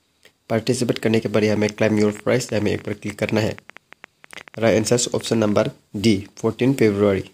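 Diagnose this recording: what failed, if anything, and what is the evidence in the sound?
Something is likely injecting impulses into the signal path, either interference coupling into the analogue wiring or a faulty connection or power supply. The result is a train of clicks from 1.50 s to 5.61 s: around fifty similar-shaped pulses at about 11.2 per second, spaced irregularly rather than on a steady beat. The clicks reach roughly the same level as the programme itself, so they stand out as popping over the sound and through its pauses alike.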